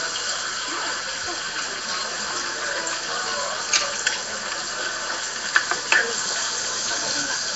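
Everyday sound, carrying Nellymoser compression damage from start to finish: a rough, hissy noise halo and a smeared, watery texture, with nothing above 7.7 kHz. The likely cause is the Flash-era Nellymoser Asao codec at a rate consistent with 32 kbps, which fills starved bands with noise.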